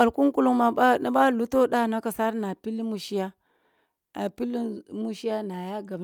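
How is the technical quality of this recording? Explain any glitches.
Listening to the recording, nothing stood out as a technical glitch.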